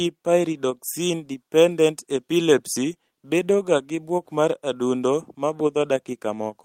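No technical faults can be heard anywhere in this speech recording. There is nothing to place on the timeline.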